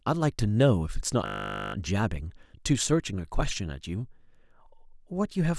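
Speech with a system hang loop from 1.26 to 1.74 s: a single 20 ms slice of audio repeats exactly, about 24 times, producing a steady 50 Hz buzz in place of the voice. The computer or audio driver stalled while the sound hardware kept replaying the same short ring buffer. On a waveform the section shows identical 20 ms cycles. A spectrogram shows evenly spaced horizontal lines at multiples of 50 Hz. Little or no audio seems lost.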